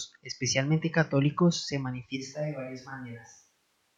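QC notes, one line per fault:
2.18 s to end, switch to a distant microphone: after "especialmente católicos se" speech turns suddenly hollow, likely a far mic; waveform drops about 5 dB, spectrogram thins below, noise floor rises.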